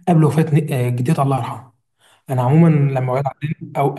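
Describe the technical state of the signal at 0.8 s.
At 0.8 s the speech signal is intact, with no audible fault at that moment.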